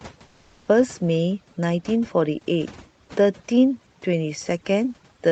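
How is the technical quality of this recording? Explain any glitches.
The quality is held back by heavy processing, with one short dropout near the start. There are three separate problems.

Throughout, there's overdone noise removal. The suppressor is cranked so hard that it mutes frequency bands near its noise estimate. The background goes nearly silent with little twinkly specks.

From about 0.27 to 0.67 s, about 400 ms of the background is replaced by comfort noise. It's a flat, featureless hiss, about 5 dB quieter than the surrounding background. That's likely Opus discontinuous transmission pausing and the receiver filling the gap.

From 0.63 to 0.67 s, the onset is clipped by the voice detector. The first 40 ms of the sound are missing, so it starts abruptly without its soft lead-in. The likely cause is the detector reacting late.

The call path tops out around 8 kHz, which fits Opus at 32 kbps. 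The room noise sits about 39 dB below the speech.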